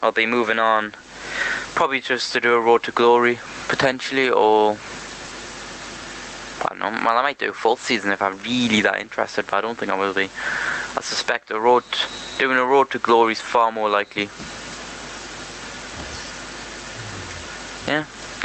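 Gain pumping runs through the whole clip: the gain swings by around 25 dB, likely from input gain set far too high with a fast limiter clamping down on each loud sound, which pulls loud and soft parts closer in level and squashes the sound.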